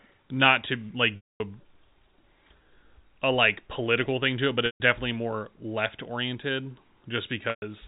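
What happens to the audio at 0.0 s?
Nothing goes wrong at 0.0 s: the speech starts intact, carried in the narrow telephone band of G.711 coding, with nothing above 4 kHz.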